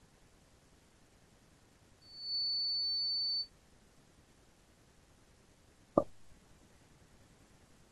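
A microphone was picking up the loudspeaker it was feeding, and at 4.5 kHz the loop gain passed unity, producing loudspeaker feedback squeal from 2.01 s to 3.50 s. That single frequency grows on itself within about a third of a second into a piercing, steady whistle that stands roughly 10 dB above the speech. It holds there until it stops at 3.50 s.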